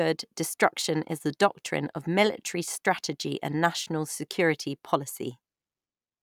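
Nothing in this speech recording stands out as a technical fault, so there's no problem to point to anywhere along the way.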